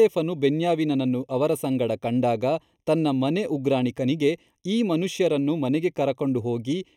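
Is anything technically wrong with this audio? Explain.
Yes. Across the whole speech clip the sound is hollow and phasey, with a thin, boxy colouring that never changes. This is channel delay (comb filtering): one channel arrives roughly a third of a millisecond after the other, and when the two are summed to mono, the parts they share cancel at evenly spaced frequencies. The first notch sits around 1.5 kHz, with further notches repeating higher up, gouging fixed gaps into the spectrum.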